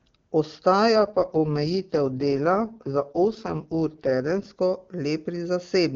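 Speech over an AMR wideband (HD Voice) link, with an AMR rate drop from 0.96 s to 4.46 s. There the voice turns rough, raspy and synthetic, which fits the codec stepping down from about 23.85 to 6.6 kbit/s to protect a weak radio link. On a spectrogram the band still reaches about 7 kHz with no gap, but harmonics blur and turn noisier in that stretch. The waveform shows no dropout, and the clear sound returns after 4.46 s.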